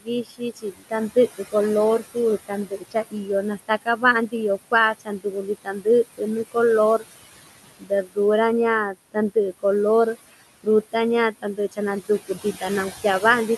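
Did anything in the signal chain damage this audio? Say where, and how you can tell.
Yes, the call processing stage's noise suppressor left noise suppressor artifacts throughout. The room noise is pulled down by about 17 dB between phrases. A spectrogram shows a pumping, speckled noise floor.

The same stage also caused speech cut by the noise suppressor at 0.00–1.54, 1.99–4.34, 4.71–6.56, 7.63–8.18, 8.92–9.64, 10.15–10.94 s, and from 11.32 s to the end. Soft consonants and endings drop by up to about 22 dB. On the waveform they show as notched envelopes, and on the spectrogram as gated holes in the weak speech energy.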